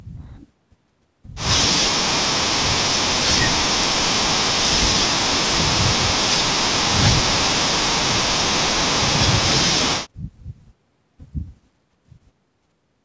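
No technical faults are audible.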